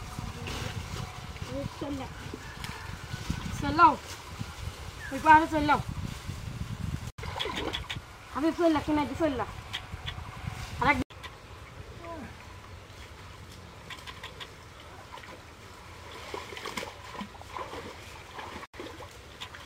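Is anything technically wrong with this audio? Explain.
Yes. Imaging from linear upsampling runs through the whole clip. The sample rate was raised by joining samples with straight lines, which fits a step from about 22 kHz to 48 kHz. That interpolation filters poorly. The top of the original band sounds dulled. A mirrored copy of the spectrum sits between about 11 kHz and 22 kHz, roughly 35 dB below the signal. It adds a faint metallic shimmer to sibilant and bright high-frequency sounds.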